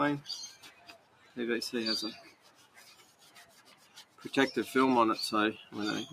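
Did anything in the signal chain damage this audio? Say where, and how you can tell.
Yes. A speech noise suppressor in the call processing stayed on for non-speech sound, treating steady content as noise. Its gain swings by roughly 15 dB, so the audio pumps and thins.

The same suppressor cut sound from 0.56 to 1.36 s and from 2.29 to 4.2 s. Sustained parts and decays sink by up to about 9 dB, while sharp onsets mostly survive.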